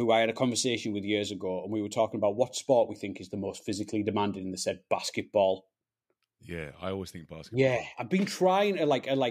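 Nothing to flag in this speech recording; there aren't any technical faults to point to.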